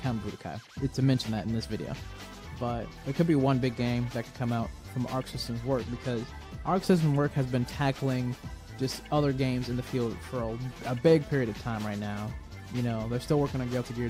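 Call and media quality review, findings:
Nothing stood out on listening; no findings to log.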